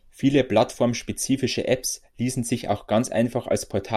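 No dropouts, clicks, distortion or other technical faults turn up anywhere in the speech.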